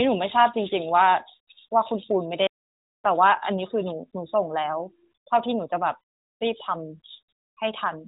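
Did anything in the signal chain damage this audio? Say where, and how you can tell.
Yes: a playback stall from 2.47 to 2.93 s. Speech cuts out for 0.46 s and then resumes, likely because the player briefly ran out of buffered data.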